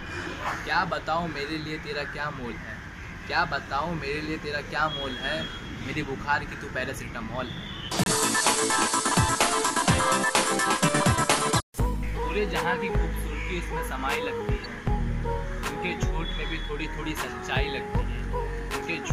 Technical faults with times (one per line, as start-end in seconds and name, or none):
8.04-8.12 corrupt frame decoded
11.56-11.62 corrupt frame decoded
14.62-14.65 corrupt frame decoded